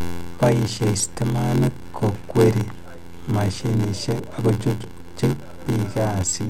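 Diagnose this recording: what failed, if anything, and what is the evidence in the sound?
A block size mismatch at the driver or buffer stage, with the short blocks padded out. Across the whole speech clip there's a steady buzz at 86.1 Hz, and the talking drags at 0.861 times normal speed while the pitch stays about right. That fits one stage writing roughly 441-sample blocks into a 512-sample read, with each block's shortfall filled with zeros. Those silent gaps repeat at the block rate, which gives you the buzz and the stretch.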